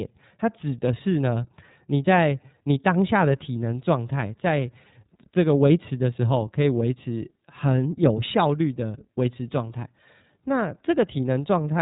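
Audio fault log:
Throughout, iLBC codec: The speech is squeezed through a narrowband voice codec, and nothing above 3.8 kHz survives. Consonants lose their crispness and the sound is boxed in. Each short block of sound is coded on its own, without reference to the one before. The result is a plainly audible rough, slightly synthetic texture. The coarseness fits 30 ms frames at a rate near 13.3 kbps, the lower of this codec's two modes.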